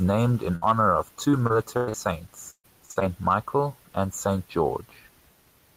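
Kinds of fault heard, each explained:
Burst of packet loss: one gap of about 60 ms right after "named in", near 0.55 s, where the last sound is stretched and faded before the speech jumps ahead. Unlike the robotic stretches, it is a single isolated dropout followed by resumption further on.
Repeated packet loss (robotic sound): four concealed gaps each in 1.31–1.96 s and 2.50–3.03 s, longest about 96 ms and 132 ms. Patches cover roughly 29% then 43% of those spans, giving choppy speech with pieces missing rather than one clean break.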